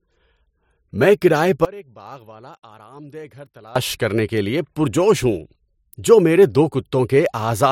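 From 1.65 s to 3.76 s, right after "میں کرایہ", the speech collapses to a faint copy of itself, roughly 23 dB quieter, with the voice almost gone until "کرنے کے لیے پرجوش" returns at full body. This is likely one channel inverted: with one stereo side's polarity reversed, the shared centre content cancels when the channels are summed to mono, leaving only their small difference audible.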